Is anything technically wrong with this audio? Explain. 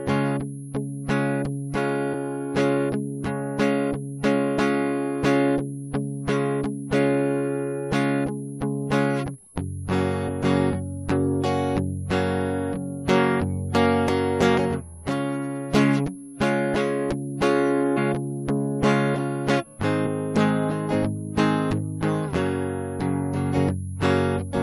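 Yes. A switching supply whistle runs through the whole music clip: a faint high tone wandering between about 10.56 and 10.70 kHz, well below the music. A power converter switching in an audible burst mode or beating with another is leaking into the audio path, and its pitch shifts as the load changes.

There is also damaged data in a compressed stream, heard as brief chirps or blips at 2.13 s, 10.28 s, 17.96 to 17.98 s and 20.05 to 20.07 s. Corrupted bytes make the decoder misread frames and lose sync, so it skips ahead to the next valid frame header, leaving a short glitch.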